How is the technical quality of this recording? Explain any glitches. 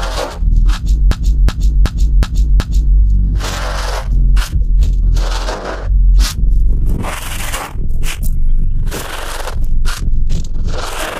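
The recording has one clear glitch: a system hang loop from 1.12 s to 2.97 s. A short slice of about 0.37 s repeats exactly five times, giving a rhythmic stutter of about 2.7 repeats per second. The computer or audio driver stalled while the sound hardware kept replaying the same ring buffer. The loop length fits a 16384-sample buffer. Because the slice is fairly long, it sounds like a skipping record rather than a buzz, and afterwards the audio picks up with next to nothing missing.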